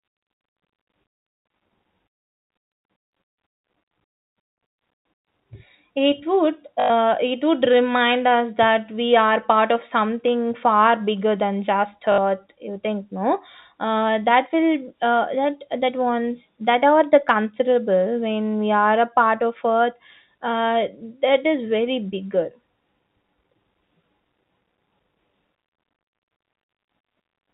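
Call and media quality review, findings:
Packet loss with last packet repeated: 6.8–6.9 s, before "it would remind us", and 12.12–12.18 s, after "far bigger than just". Short robotic stutters with a 50 Hz buzz, which fits 20 ms packets. Receiver concealment is looping the last packet.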